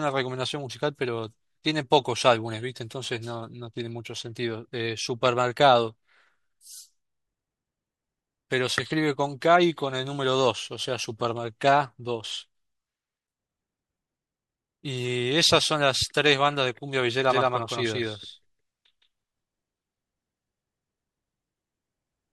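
From 17.30 s to the end, the speech is likely being captured a second time through a slower path, so a copy lands around 150 ms behind. This doubled audio track enters abruptly at roughly equal level, full-band and dry, giving every syllable a clean slapback echo.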